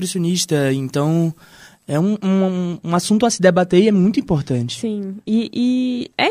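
From 0.0 to 2.0 s the speech has pre-emphasis left on. The treble was lifted before recording or transmission, and the matching de-emphasis was never applied. The shape fits the standard 50 µs FM curve. At 10 kHz the level sits about 11 dB above 1 kHz. The result is thin and overly bright. Sibilants hiss and spit. The lower body of the voice seems to drain away.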